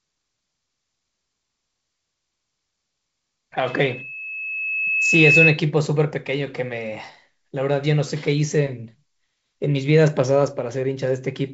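Speech, carried over G.722 wideband telephone coding with its light upper-band hiss and nothing above 7.7 kHz, is hit by loudspeaker feedback squeal from 3.66 to 5.61 s: a 2.6 kHz tone swells over roughly 1.5 s to about 10 dB above the speech. A fixed interference whistle would start at full level.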